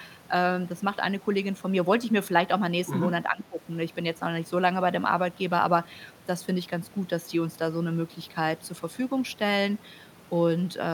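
From 2.86 to 3.08 s a second voice slips in underneath the main speech, only a few decibels quieter than it. This is the other side's voice leaking through: the talker's device was playing the far end over a loudspeaker, and the microphone picked that playback up again. The echo canceller likely failed to strip it out, so a short fragment of the remote talker survives in the signal.

Shortly after, from 3.29 to 3.6 s, the main speech sinks sharply, dropping by roughly 15 dB at its deepest and staying low for about a third of a second before recovering. This is speech suppressed in double talk. Both parties seem to have been talking together at that moment. The echo canceller, likely unable to tell the near talker apart from the loudspeaker echo, pulled the level of everything down.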